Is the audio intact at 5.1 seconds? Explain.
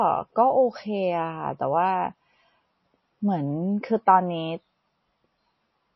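No. At 5.1 s, as throughout, the speech sounds watery and dull with nothing above 5.8 kHz, likely from heavy MP3 compression that fits a bitrate near 24 kbps.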